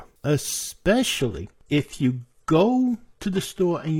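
At 1.19 s the speech drops abruptly to an adaptive stream at a lower bitrate and stays there to the end. Nothing remains above 12.3 kHz and codec artefacts rise, which points to a switch to a low-rate HE-AAC stream.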